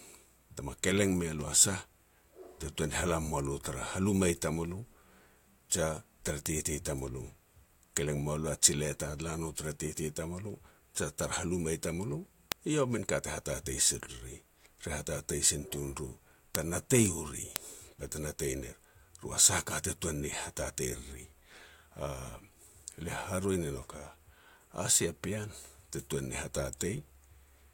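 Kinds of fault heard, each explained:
Word clock ticks: the receiving device runs on its own clock, drifting roughly 50 ppm from the sender's, so single samples slip. This gives sharp ticks about every half second, roughly fifty in all, through the speech from 0.4 s to 27.65 s.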